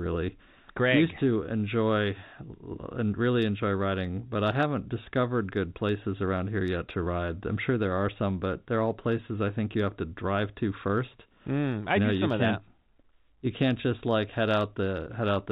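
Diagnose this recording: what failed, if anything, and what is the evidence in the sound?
Nothing failed in any stage; the speech comes through an ordinary G.711 telephone path, band-limited at 4 kHz with only the faint level-following quantisation hiss that format carries.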